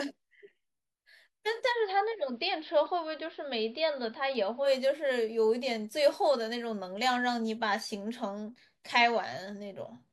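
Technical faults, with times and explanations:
1.65–4.71 s: digital radio blending to analogue. The speech cross-fades over about 100 ms to an AM fallback, losing treble, dropping about 2 dB and gaining faint hiss some 40 dB down, then blends back to the full-band digital signal.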